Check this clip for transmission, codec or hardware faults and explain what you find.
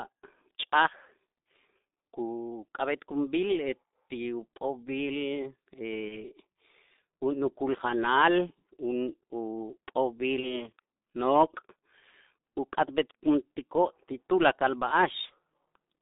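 Two faults are present: heavy G.723.1 codec damage throughout, and three short dropouts patched over by VoIP packet loss concealment.

G.723.1 codec, whole clip: a low-rate coder, consistent with its 6.3 kbit/s mode, confines speech to roughly 200 Hz to 3.7 kHz and tracks it coarsely, leaving a muffled, hoarse sound with smeared consonants.

VoIP packet loss concealed by the speech codec, at 6.08–6.23 s, 10.40–10.62 s and 15.26–15.30 s: each gap, which fits one lost 30 ms frame, is filled by extrapolating the previous pitch and filter with falling gain, producing a brief buzzy or noisy, fading smear that lingers before clean decoding resumes.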